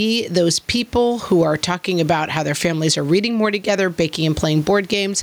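Gain pumping runs throughout this speech clip. The gain swings by something like 10 dB, so loud and quiet moments sit unnaturally close in level and the voice sounds squashed. The likely cause is input gain set far too high, with a fast limiter or compressor clamping down on every loud syllable and releasing in the gaps. The room noise on its own sits about 38 dB below the speech.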